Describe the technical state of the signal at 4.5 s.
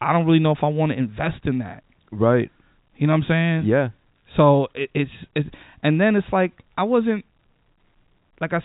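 At 4.5 s the signal is intact, with only the G.711 telephone coding path audible in its narrow band that stops around 3.8 kHz.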